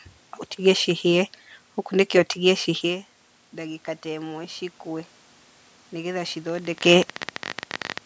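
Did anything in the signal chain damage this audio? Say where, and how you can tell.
Yes. From 2.65 to 5.18 s, just after "ũtige cihĩe ũkunĩke ũtige", the call processing stage shows automatic gain rising. The input level fell by about 15 dB as the talker moved back from the microphone around 3.0 s, and the gain control responded by lifting its gain about 4 dB over roughly two and a half seconds. Voice and room noise swell together during that stretch, which marks it as gain applied to the whole signal and not a change at the source.

From 6.47 to 7.99 s a train of clicks sits over the sound, around 40 short pulses at roughly 22.5 per second with uneven spacing, peaking at around 10 dB above the signal. The pulses have much the same shape and continue regardless of what the voice is doing. The likely cause is electrical interference in the analogue wiring or a faulty connection or power supply. 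The talker also shifts position near 6.5 s, but that only changes the voice level and does not account for the clicks.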